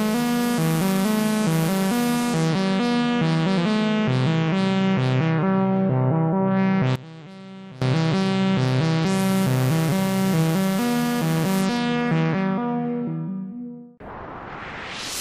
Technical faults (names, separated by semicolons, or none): one channel inverted